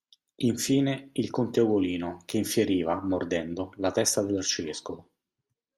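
A speech recording with no audible technical faults.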